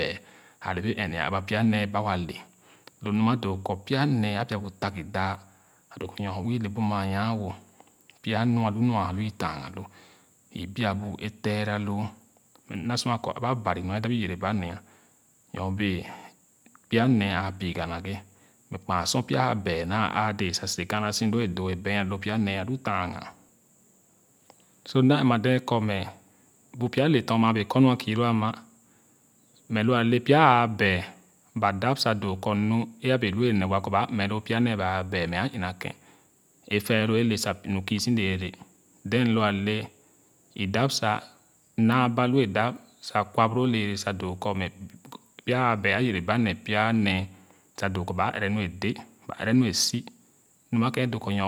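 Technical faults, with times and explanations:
Nothing to flag here; the speech runs along without any technical faults turning up at any point.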